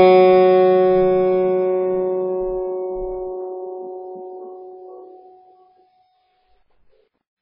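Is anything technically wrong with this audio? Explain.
Yes. Throughout, the music sounds watery and swirly, with nothing above 5.2 kHz. This is likely heavy MP3 compression, where a starved bitrate near 16 kbps cuts the treble and makes weak frequencies flicker.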